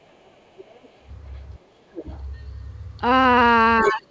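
From 0.04 to 1.05 s the speech is pulled down by roughly 15 dB in patches, about half a second in total. This is speech suppressed in double talk, likely because the echo canceller turned the talker down while the far end was also speaking. The waveform shows notched dips, and the spectrogram shows thinned, fading bands.

Inside that stretch, at 0.24–0.40 s and 0.57–0.95 s, the other side's voice leaks through. It is faint, some 30–40 dB under the speech, and likely residual echo from the loudspeaker. A second, fainter harmonic pattern is just visible beneath the main trace. A short scrap returns at 1.35–1.39 s, again very low.

At 1.73–2.04 s a second double-talk suppression cuts in, about 15 dB deep and around 200 ms in total. It overlaps a louder leak at 1.95–2.19 s, only about 15 dB down, which shows as clearly separate energy bands.

At 3.82–3.92 s the leaked voice is nearly as loud as the talker, within about 5 dB. 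At 3.84–4.09 s the talker dips by about 20 dB. The waveform sags, and the spectrogram shows the competing voice sitting just beneath the talker.

Throughout the clip, the band stops at 8 kHz, which fits a wideband call codec.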